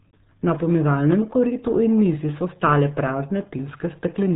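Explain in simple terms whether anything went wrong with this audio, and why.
The whole clip has been squeezed through the RealAudio 14.4 codec, an old format built for dial-up modems. It throws away a lot of detail to make the file tiny. Everything above about 3.8 kHz is gone, so the speech sounds muffled and dull from start to finish. The heavy squeezing also leaves a gargly, watery texture on the speech. It sounds like someone talking through a bad phone line.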